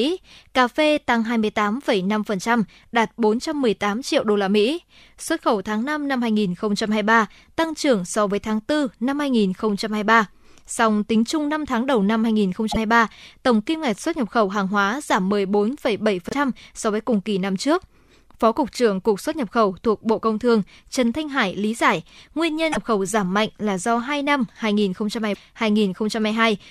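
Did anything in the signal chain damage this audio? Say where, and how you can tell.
Yes. The speech jumps forward in short glitches of chirp or noise at 12.71–12.77 s, 16.29–16.34 s, 22.72–22.77 s and 25.33–25.36 s. Each lasts one or two 26.1 ms frames. This likely points to a broken MP3 bit reservoir at the codec or storage stage.

A single loud pop sits at 15.31–15.33 s, a few decibels above the speech, which carries on beneath it. It is a sharp voltage pulse added to the signal. Its likely cause is analogue wiring, a switch or a driver glitch.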